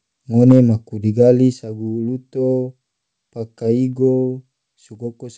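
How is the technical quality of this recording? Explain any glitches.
The recording has three glitches: one burst of distortion and two sudden level drops, all heard over a call line whose sound stops at 8 kHz.

From 0.50 to 0.52 s, just before "maku digali", there is microphone overload. Peaks about 2 dB over the converter's limit lose their tops, likely from input gain set too high. A sizable share of samples is flattened, giving a harsh crackle rather than codec hiss.

At 0.52 s the microphone volume steps down by about 3 dB, and at 1.53 s, just after "maku digali", it steps down again by about 6 dB. The call software likely lowered the input gain in single steps. Voice and background drop together, so it is not a fade in the talker's own level.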